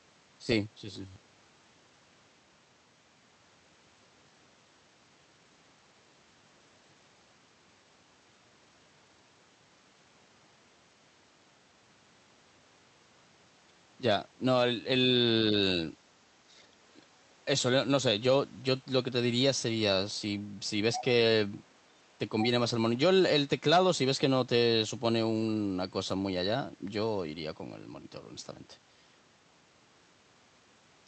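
Robotic sound from repeated short buffers runs from 0.93 to 1.23 s: the speech becomes a rigid metallic buzz near 93.8 Hz, likely because audio arrived too slowly and roughly half the time was filled by repeating a stretch of about 11 ms.

The other side's voice leaking through appears briefly at 20.93 to 21.04 s and 22.39 to 22.47 s, about 10 dB below the speech. These are short scraps, likely far-end loudspeaker sound the echo canceller failed to remove from the microphone.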